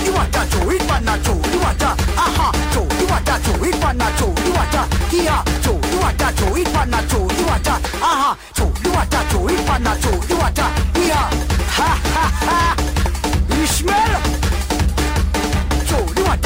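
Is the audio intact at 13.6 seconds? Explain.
No. At 13.6 s, as throughout, there is imaging from linear upsampling. The straight-line interpolation points to a rise from 24 kHz to 48 kHz, dulling the top of the band and leaving a faint mirror image roughly 25 dB down between 12 and 24 kHz. It is heard as a light metallic shimmer. Unlike aliasing, the stray energy sits above the original band rather than folding back into it.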